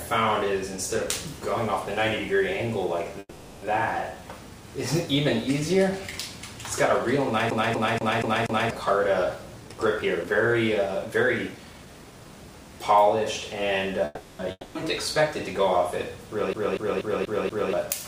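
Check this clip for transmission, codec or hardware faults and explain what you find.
The clip has four kinds of fault: two call audio freezes, two CD-skip loops, two stretches of jitter buffer speed-up, and one long network dropout.

Call audio freeze, 3.19 to 3.65 s and 14.05 to 14.42 s: the likely cause is delayed packets draining the jitter buffer. The last sound is stretched into a fading buzz for about 430 ms and 340 ms. The first ends in about 40 ms of silence. Then the audio resumes intact. On a spectrogram this shows as smeared, flat horizontal bands.

CD stuck on one turn, 7.50 to 8.71 s and 16.53 to 17.73 s: the laser jumps back at the same point on each rotation. A 240 ms slice plays five times over with a brief mute at each jump. The waveform shows identical blocks repeating at an even interval.

Jitter buffer speed-up, 9.61 to 10.55 s at 123% and 11.05 to 12.33 s at 117%: the receiver drained an overfull buffer by cutting out pitch-period-sized pieces. 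Each stretch loses about a fifth of a second. The sound rushes ahead at unchanged pitch, and the spectrogram looks horizontally compressed.

Long network dropout, 14.51 to 14.78 s: this likely comes from packets that never arrived, just after the second freeze. About 240 ms of audio is gone. A fading filled tail ends in roughly 30 ms of silence, and the audio then resumes further on. A spectrogram shows the smear, a blank gap, then an abrupt restart.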